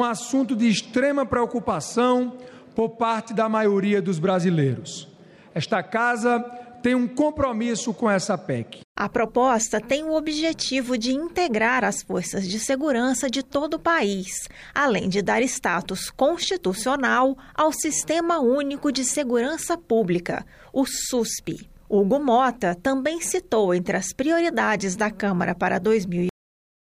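The audio has a cut-off end: at 26.29 s it stops mid-sound and drops straight to digital silence with no decay, because the final buffers were never written.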